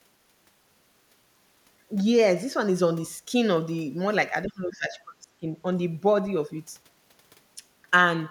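Speech in this clip falls away sharply between 4.45 and 5.48 s, dropping by roughly 25 dB at its deepest for about a second before recovering. The pattern fits speech suppressed in double talk, most likely an echo canceller that heard both ends talking at once and turned the near talker down along with the echo. Unlike a packet-loss dropout, the suppression spans a sustained stretch rather than vanishing in brief, clean gaps.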